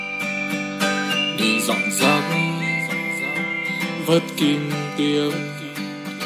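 No audible technical faults anywhere in this recording.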